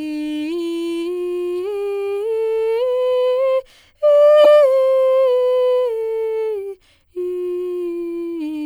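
A corrupt frame decoded at 4.44 to 4.46 s cuts into this music clip as a brief, loud burst. It likely comes from damaged bits in a few compressed frames that the decoder played anyway, scattering energy into the wrong frequencies.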